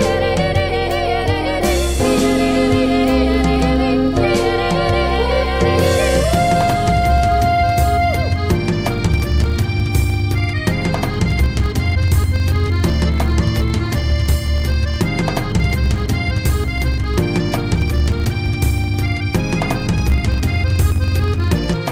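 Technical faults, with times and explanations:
Throughout: filter restarted on every block. The filter loses its stored state at each block boundary and starts again from silence, so every block opens with a small transient. These repeat as a buzz at 50 Hz, which points to blocks about 20 ms long, and the buzz follows the signal's level.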